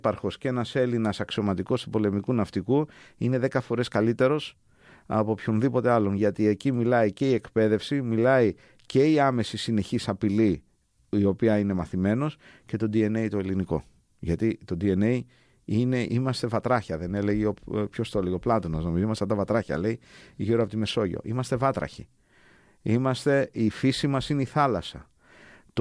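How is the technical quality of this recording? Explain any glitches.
The recording's signal stays intact and steady throughout, with nothing in it that needs explaining.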